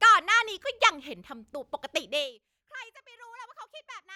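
From 2.05 to 2.41 s the speech level falls by roughly 25 dB in unsmoothed 1 dB steps, about 50 per second. Each step clicks, producing zipper noise: a fine, rapid ticking riding on the fade.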